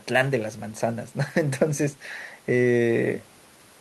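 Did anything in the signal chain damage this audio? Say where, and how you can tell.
No, nothing stood out on listening to this speech clip that would point to damage anywhere in the signal chain.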